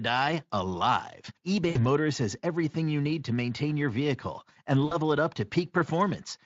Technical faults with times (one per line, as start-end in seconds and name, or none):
1.69-1.86 VoIP packet loss concealed by the speech codec
4.85-4.96 VoIP packet loss concealed by the speech codec